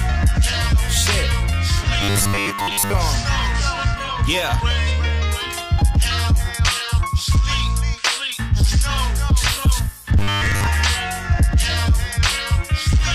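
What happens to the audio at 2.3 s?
Robotic sound from repeated short buffers, 2.02 to 2.94 s: 10 ms fragments are likely replayed over most missing audio, imposing a rigid 100 Hz metallic buzz.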